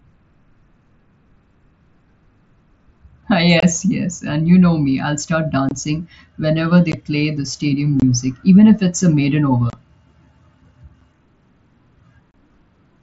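Unconcealed Bluetooth headset packet loss hits the speech at 3.60–3.63, 5.69–5.71 (after "know me I'll start"), 6.92, 8.00–8.02, 9.70–9.73, 11.01 and 12.31–12.34 s. Each abrupt hole of 7.5 to 30 ms fits whole 7.5 ms mSBC packets dropped over the wireless link and replaced with silence or an idle pattern.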